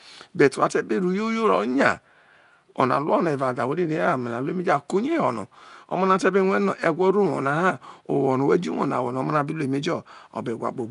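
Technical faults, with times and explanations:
throughout Nellymoser compression. The speech sounds rough, hissy and smeared, with nothing above 10.6 kHz. Likely the Nellymoser Asao codec, filling starved bands with noise.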